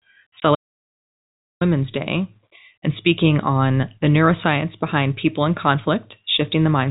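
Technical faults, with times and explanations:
0.40 to 0.42 s, packet loss filled with silence: A stretch of the stream never reached the receiver, and the player wrote silence in its place instead of concealing the gap. The hole lasts 20 ms, which fits a single lost 20 ms packet. Because the signal drops to silence and returns without any fade, the gap has hard edges that briefly chop the speech.
0.55 to 1.61 s, audio dropout to silence: The input feeding the recording was most likely interrupted, through a disconnected device, a broken link or an accidental mute, while the recorder kept writing silence. The speech cuts out abruptly mid-flow and returns about 1.06 s later. The gap is silent with no room tone, and whatever was said during it is gone.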